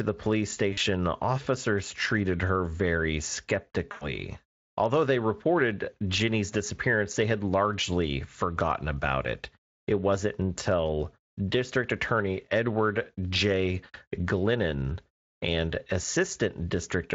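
VoIP packet loss concealed by the speech codec breaks this speech clip at 0.73 to 0.79 s, between "the police" and "officers treated her very", and again at 3.91 to 4.14 s. The decoder stretches the last pitch into a fading buzz or coloured noise across gaps fitting two and five 20 ms frames, leaving the voice weakened briefly afterwards.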